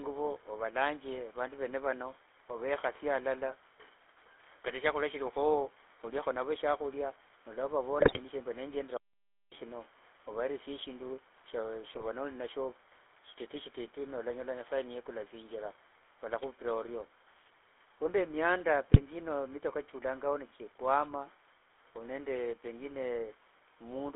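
Speech heard through the GSM full-rate codec throughout, buzzy and gravelly, with spectrogram energy confined to about 300 Hz to 3.5 kHz. GSM bit errors at 7.98–8.18 s, 11.94–12.04 s and 18.92–19.01 s corrupt decoder parameters, producing squawks and pops seen as sudden waveform spikes and smeared spectral blotches.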